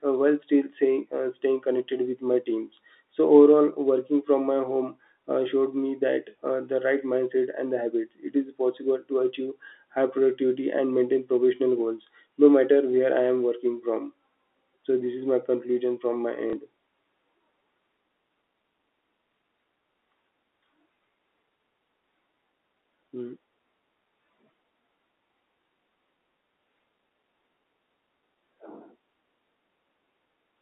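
At 16.50 to 16.53 s, right after "my conclusion from my", the stream suffers packet loss with the last packet repeated. A 30 ms gap, consistent with a single dropped packet, is filled by replaying the previous chunk. The replayed segment produces a brief, small blip rather than a clean continuation, all within the 250 Hz to 3.7 kHz telephone band of the G.711 line.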